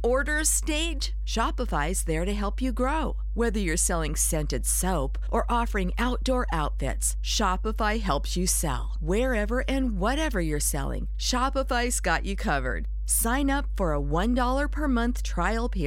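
A speech recording with mains hum running from start to finish: a steady low tone at 50 Hz, with some low harmonics above it, sitting at roughly the same level as the speech. A ground loop or a nearby transformer is feeding the power line into the signal. Unlike rumble from handling or wind, which is broadband and shifts, this tone holds one fixed pitch and never changes between or during phrases.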